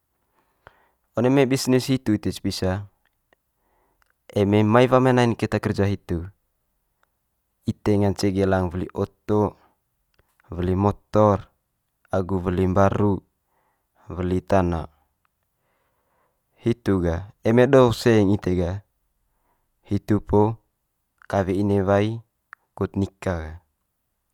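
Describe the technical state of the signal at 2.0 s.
At 2.0 s the speech signal is intact, with no audible fault.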